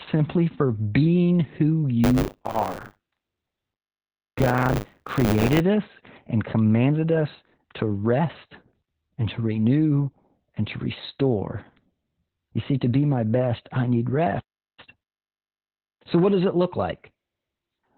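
Throughout, Opus voice compression at 8 kbps in SILK narrowband mode cuts everything above 4 kHz. The speech sounds muffled, hoarse and slightly robotic.

From 2.03 to 5.61 s, between "for being who" and "us and commanded us", buffer tearing adds a 100 Hz robotic buzz. About a fifth of each 10 ms period replays audio from a few tens of milliseconds earlier.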